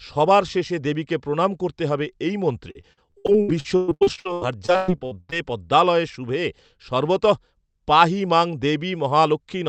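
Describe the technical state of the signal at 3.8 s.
At 3.8 s the speech sits inside repeated packet loss (robotic sound), running from 2.71 to 5.34 s, between "প্রণাম করতে হবে এই" and "পদ্মালয়ে শুভে". Lost packets are patched by stretching the preceding sound, with gaps up to 117 ms and roughly 41% of the span concealed. It sounds choppy, with pieces missing. On a spectrogram, smeared, frozen harmonic bands alternate with brief holes.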